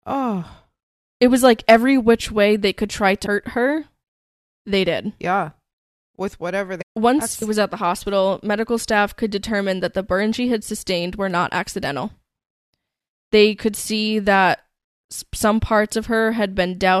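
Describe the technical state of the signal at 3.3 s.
Damaged data in a compressed stream at 3.25 s, right after "way they could try": corrupted frames throw the decoder out of sync, leaving a brief blip.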